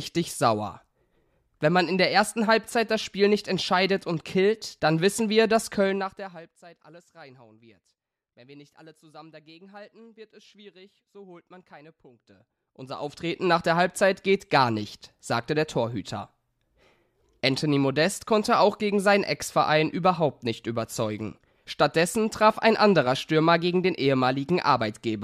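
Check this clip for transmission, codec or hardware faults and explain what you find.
Two stretches of zipper noise stand out in the speech, both during level moves. From 5.80 to 6.54 s the level drops by roughly 25 dB in 1 dB steps at around 30 per second. From 12.17 to 13.53 s it climbs back by roughly 25 dB at around 20 steps per second. Each unsmoothed gain jump puts a tiny click in the signal, heard as a fine ticking riding on the speech. The waveform envelope shows a staircase, and the spectrogram shows faint, evenly spaced vertical lines across the band.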